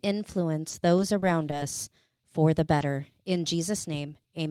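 Between 0.69 and 1.55 s there are scattered short gaps, about four small holes of up to 20 ms, each patched by extending the preceding sound. They come through as brief ticks or little smears.

At 2.17 s, just before "for the", there's a short stall from a late packet. The jitter buffer ran dry, so the last sound is held an extra 20 ms before carrying on with nothing lost.

Then come two short concealed packet losses, at 2.79 s just after "for the" and at 4.23 s. Each time 20 ms never arrived and was filled by continuing the prior sound, leaving a brief smear or wobble.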